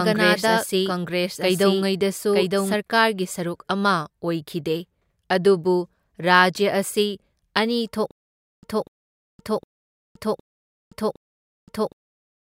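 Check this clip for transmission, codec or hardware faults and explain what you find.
Two faults are present: a doubled audio track at the start and a stutter with silent gaps at the end.

The doubled audio track is already running when the clip begins and stops abruptly at 2.74 s. A second full-band copy of the speech trails the original by roughly a second, at about 5 dB lower. It has no reverb tail or room colour. It sounds like a flat, out-of-step echo. The likely cause is the signal being captured twice, once through a slower path.

The stutter with silent gaps starts at 8.11 s and lasts to the end. A 0.24 s burst of speech repeats five times. Each repeat is followed by 0.52 s of digital silence, so the burst returns every 0.76 s. This is likely a stalled stream or player that replays its last fragment on each retry and then runs dry. The speech that should fill those gaps is lost.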